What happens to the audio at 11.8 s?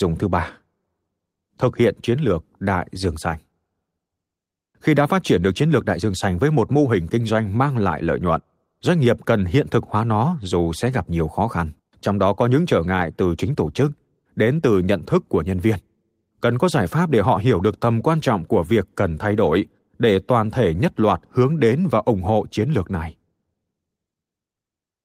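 Right after "gặp nhiều khó khăn", at 11.79 s, there's a skip ahead: roughly 0.4 s of speech got dropped, probably because audio piled up while later packets were already waiting. Playback just jumps forward with no gap, so the two sides butt straight together.

Then from 11.89 to 13.80 s, a jitter buffer speed-up kicks in as the receiver trims tiny pitch-period slices to shrink its backlog. Speech runs at 110% with pitch unchanged, losing about a fifth of a second and sounding a bit rushed until "đến từ nhận thức".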